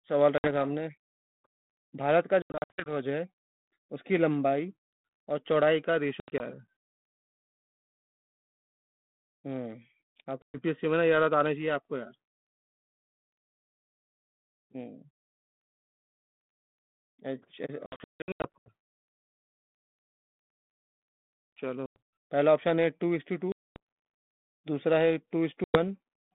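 Packets on this ADPCM call are dropped and filled with silence, so each packet loss on an ADPCM call leaves a hard-edged gap. The receiving decoder's adaptive predictor and step size then drift from the sender's. The speech comes back with brief distortion that settles within tens of milliseconds. It happens at 0.38, 2.42–2.93 (scattered, longest run 80 ms), 6.2–6.41, 10.42–10.59, 17.86–18.69 (scattered, about half a second missing), 21.86, 23.52–23.77 and 25.64 s. The light, band-limited G.726 ADPCM coding around it points to the 32 kbit/s rate.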